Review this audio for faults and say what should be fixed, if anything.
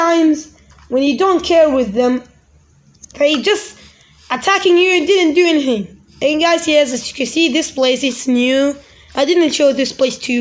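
Nothing here needs fixing, so it's fine to leave the audio as it is.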